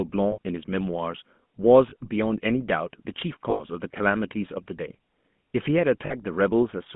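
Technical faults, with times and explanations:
Throughout, GSM full-rate codec: the speech has passed through the original GSM full-rate coder, which points to a 13 kbps mobile link. It describes the vocal tract with a short-term filter and excites it with a sparse, regularly spaced pulse train that keeps only a fraction of the true excitation. That thinning leaves a plainly audible buzzy, gravelly grain on the speech. The line band runs from about 150 Hz to 3.5 kHz, so the sound is thin and boxy.
0.32–0.38 s, 1.90–1.94 s, 3.50–3.62 s and 6.06–6.14 s, lost GSM frames: at each point the decoder received unusable frames, about 60, 20, 100 and 40 ms' worth. It filled each gap by reusing the last good frame's filter and excitation settings. The speech briefly freezes into a rough, metallic ring instead of moving on. The ring is longest at 3.50 s.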